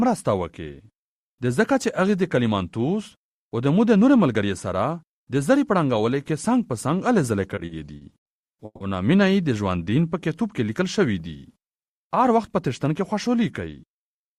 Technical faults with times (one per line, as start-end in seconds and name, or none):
7.55-8.28 repeated stalls (stutter)
8.65-8.83 call audio freeze
9.78-10.09 jitter buffer slow-down
13.41-13.74 jitter buffer speed-up